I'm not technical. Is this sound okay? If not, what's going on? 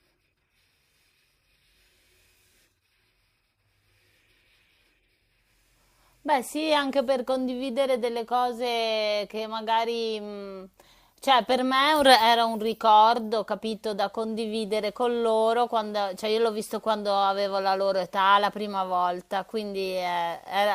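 Yes, nothing in this recording stood out as a problem when I listened to it.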